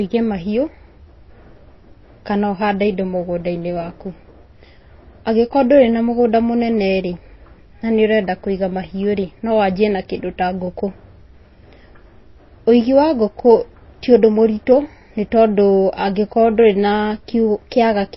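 Speech recording, likely passed through low-bitrate MP3 compression, around 24 kbps judging by the damage: nothing remains above 5.8 kHz throughout, and the sound is plainly watery and swirly, with smeared consonant attacks.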